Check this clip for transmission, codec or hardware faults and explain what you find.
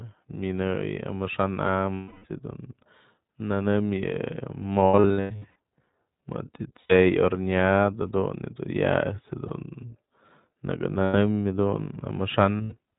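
Two faults are present in this speech: coding damage from the iLBC codec across the whole clip, and several bursts of lost iLBC frames.

Throughout, the speech sounds slightly rough and synthetic, and nothing above 4 kHz comes through, so sibilants and breath lose their edge. This is the iLBC codec, a narrowband VoIP coder that models the excitation of each frame on its own. The damage is plainly audible. The 20 ms framing and the character of the artefacts point to iLBC's 15.2 kbps mode.

Lost iLBC frames are heard at 1.94 to 2.26 s, 4.81 to 5.56 s, 6.80 to 6.93 s, 9.48 to 9.51 s, 11.04 to 11.15 s and 12.57 to 12.74 s. In each gap the sound holds on a buzzy, breathy vowel-like tone. The decoder is repeating the last pitch cycle mixed with noise. At 1.94 s a solid 300 ms is replaced, so the tone audibly fades. The 4.81 s stretch has 500 ms missing, scattered over 800 ms in runs of up to about a tenth of a second. 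The 12.57 s event has 140 ms missing over 160 ms. Each iLBC frame decodes independently, so the voice is right again almost immediately after every gap.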